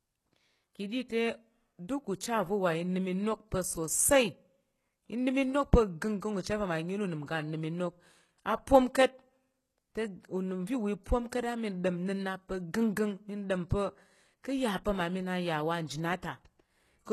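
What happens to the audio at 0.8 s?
At 0.8 s the speech carries the same damage heard across the whole clip, likely HE-AAC compression at a bitrate near 16 kbps. Its treble is rebuilt from copied lower bands, so s sounds turn gritty and lispy. A spectrogram shows repeated-looking upper bands and nothing above 12.3 kHz.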